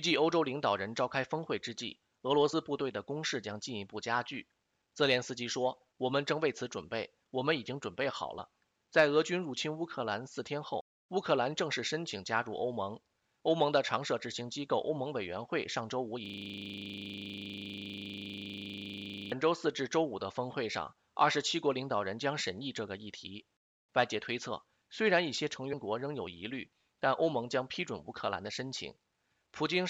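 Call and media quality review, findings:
Compressed frames skipped at 2.52 s, 8.38 s and 25.72 s. Audio jumps forward about two frames, roughly 50 ms, against a 26.1 ms frame length. Decoder side: damaged or missing frames dropped. Overlapping frames smear each join into a soft blip, not a click. Waveform shows a slight discontinuity with no spike. Spectrogram shows a thin vertical seam where content abruptly shifts.

System hang loop, 16.26 s to 19.32 s. One 40 ms piece repeats 77 times, giving a steady buzz at 25 Hz. Probable cause is a host or driver stall while the output device keeps cycling its ring buffer. Waveform shows an identical 40 ms pattern tiled end to end. Spectrogram shows regular vertical striping every 40 ms and frozen spectral content for the full three seconds.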